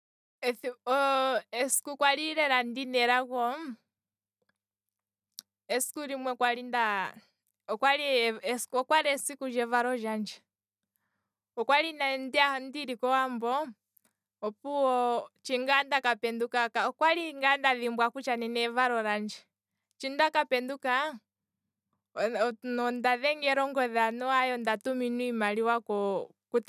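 Nothing to flag here, as there's no technical fault to be heard anywhere in this speech recording.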